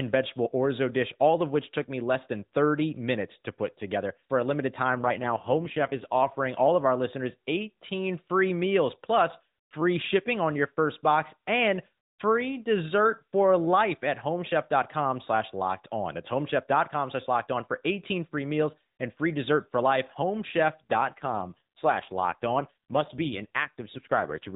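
From 4.96 to 6.41 s, between "a limited" and "all of our listeners", there is an AMR rate drop. The speech turns buzzy and synthetic, which fits the narrowband codec falling from 12.2 to 5.9 kbps. There is no gap. It recurs from 20.94 s to the end.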